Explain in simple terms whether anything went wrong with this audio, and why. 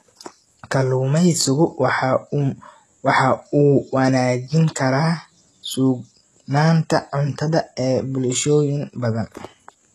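Yes, throughout the whole recording the speech has heavy HE-AAC compression, likely from a low-quality streaming or voice codec. The top end stops dead above 12.4 kHz, yet the treble still reaches up that high because it's rebuilt from lower sounds, so s sounds come out gritty and lispy rather than simply dull or muffled.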